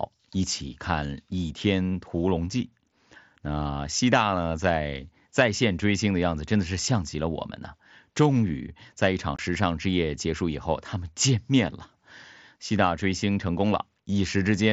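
At about 9.36 to 9.39 s the speech drops out for roughly 22 ms, abrupt edges and all. That's unconcealed Bluetooth headset packet loss: a few packets between headset and phone went missing, which fits about three lost frames, and the gap was left unfilled. It sounds like a quick hole over the light graininess of the mSBC link.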